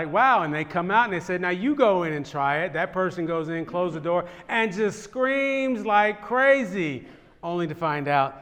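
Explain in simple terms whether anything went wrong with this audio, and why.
Nothing went wrong here: the recording comes through steady and intact, with no dropouts, glitches or other technical problems anywhere in it.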